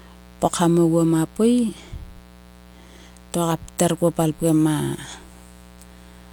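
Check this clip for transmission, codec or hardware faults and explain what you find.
A mains buzz runs under this speech from start to finish, and it is the only fault present. Its spikes repeat twice per cycle of 60 Hz mains. That comes from a dimmer, a rectifier or an unshielded cable letting sharp switching spikes into the signal. Because the spikes are so abrupt, the harmonics of 60 Hz climb into the kilohertz range, sitting roughly 25 dB below the speech. The result is a steady, raspy buzz rather than a smooth hum, and that upper-harmonic edge is what sets it apart from plain low-frequency hum.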